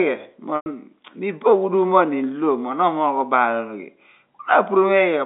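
From 0.56 to 0.66 s, packet loss with pitch repetition loops one pitch period across a 100 ms gap. It sounds like a buzzy, fading hold, with identical waveform cycles and flat spectrogram harmonics.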